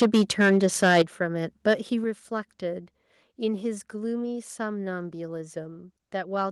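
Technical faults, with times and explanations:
0.01–1.02 s and 1.67–1.74 s, microphone overload: the loudest syllables get a harsh, crackly edge, around a tenth of the waveform flattened early on and less later. That's likely the input driven about 11 dB, then about 2 dB, past the converter's ceiling, chopping off the peaks.
0.03, 1.02 and 2.04 s, microphone volume stepped down: the whole level, background included, drops abruptly by about 2, 7 and 4 dB. Likely the call software reacting to those clipped peaks and turning the device's input gain down in single steps.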